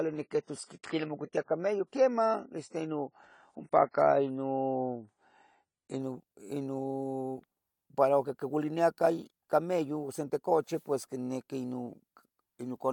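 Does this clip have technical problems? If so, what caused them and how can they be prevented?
Yes. From 0.0 to 6.0 s the speech shows an adaptive stream starting at a low bitrate: the player chose a lean encoding to begin quickly, so nothing above 10 kHz survives and codec artefacts are stronger, which fits roughly 24 kbit/s AAC, until quality jumps without a gap to what sounds like about 96 kbit/s. Starting on a higher rung, or buffering briefly before playback, prevents it.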